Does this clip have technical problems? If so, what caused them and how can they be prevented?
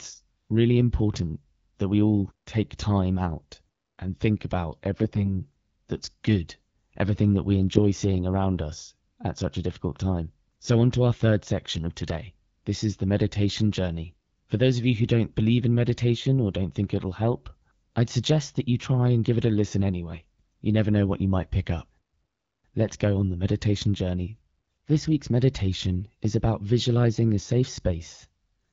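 Yes. The speech turns hoarse and gargly at 5.02 to 5.42 s, between "out and think about" and "that's good everything that", and at 14.13 to 14.43 s, after "is the meditation journey". These are AMR bit errors: at a bit error rate of roughly 4 percent, flipped low-priority bits passed the checksum, misplacing excitation pulses and skewing gain and spectral values. A stronger radio link or more robust channel coding would prevent this.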